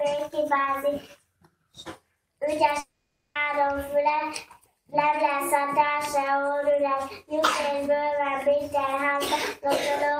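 From 2.79 to 3.37 s the audio breaks off: the last sound is stretched into a fading buzz, then about 330 ms of near-silence follows before it resumes with material missing. On a spectrogram this shows as smeared, decaying bands, then an empty gap, likely from a long network dropout.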